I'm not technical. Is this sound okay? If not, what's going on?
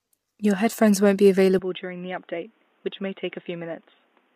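No. Throughout, the speech sounds rough and grainy, most likely from low-delay AAC compression, the kind used in video calls, which squeezes the sound hard and keeps delay low.

From 1.59 s to the end, the sound abruptly turns duller and quieter, with new background noise. This likely comes from the input switching to a poorer device, which drops everything above 3.8 kHz.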